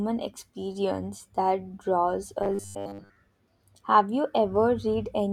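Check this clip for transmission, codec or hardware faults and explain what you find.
One fault is present. From 2.43 to 3.16 s there is robotic sound from repeated short buffers, a rigid metallic 100 Hz buzz loosely following the speech. Its likely cause is late-arriving audio, with a 10 ms chunk looped through most of that stretch. Spectrograms show flat harmonics every 100 Hz, and the waveform shows identical 10 ms cycles.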